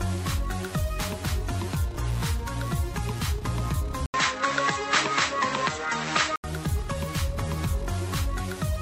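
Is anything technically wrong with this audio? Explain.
Yes. Between 4.06 and 6.44 s the input likely switched to a poorer device. An 80 ms gap precedes duller sound capped at 8 kHz with a faint new noise floor, which a simple filter change wouldn't bring.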